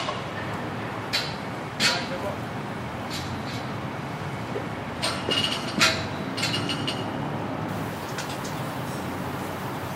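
An everyday sound recording. From 7.69 s to the end, pre-emphasis is left on. An FM-style 50 µs treble boost, about 10 dB at 10 kHz, was never undone. The sound turns thin and bright.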